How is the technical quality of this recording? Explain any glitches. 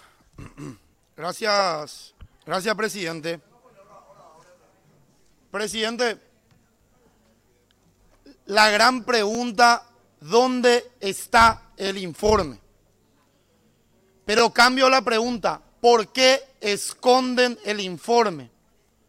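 The recording has one recurring glitch, overlapping chunks, at 1.79–1.81, 9.35–9.37, 11.87–11.89, 14.39–14.41 and 16.91–16.93 s. Audio handled in 2.5 s chunks overlaps at each join, replaying 20 ms and producing a brief click or stutter.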